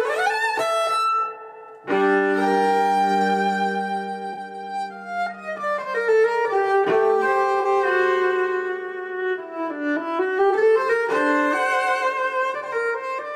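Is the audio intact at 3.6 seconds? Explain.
Yes, the audio is intact at 3.6 seconds, with no dropout, click, distortion or other fault audible at that moment.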